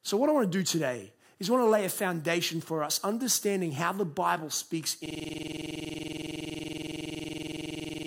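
A system hang loop begins at 5.06 s and runs to the end: the playback side froze while the hardware kept replaying one 46 ms slice of buffered speech, a length that fits a 2048-sample buffer, repeating at 21.5 Hz as a rapid, rattling stutter.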